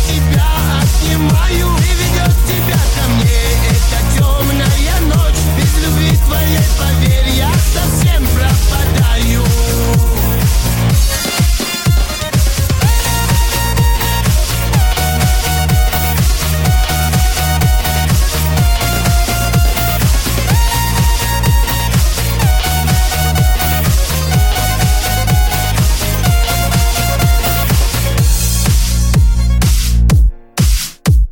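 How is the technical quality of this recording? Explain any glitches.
The recording suffers from mild hard clipping throughout. Peaks exceed the stage's ceiling by about 2 dB and are cut flat, affecting roughly 0.7 percent of samples, which adds brief crackle on the loudest moments.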